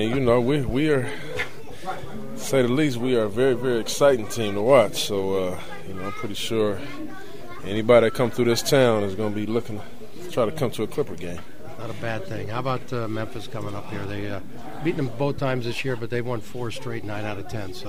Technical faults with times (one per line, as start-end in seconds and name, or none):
none